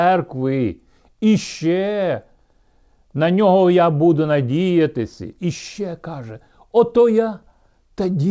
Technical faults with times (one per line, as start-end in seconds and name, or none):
none